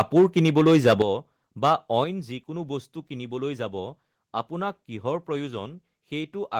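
A speech recording whose opening second is marred by microphone overload: from 0.0 to 1.02 s the peaks run about 8 dB past full scale, so roughly one sample in twenty is flattened, giving a harsh crackle on the loudest syllables. It returns more briefly from 1.65 to 1.73 s at about 4 dB over, with a few percent of samples clipped. The likely cause is an input level set too high, driving the converter into its ceiling. The distortion rides only on the peaks, not on the quieter sound.

Microphone volume stepped down follows each burst. At 1.02 s the whole signal, speech and background alike, drops by about 9 dB in a single instant, and at 2.04 s it drops again by about 5 dB. Most likely the call software reacted to the clipping by cutting the device's input gain. A fade would glide down, and a compressor would dip and recover, but here each change is one abrupt step that then holds.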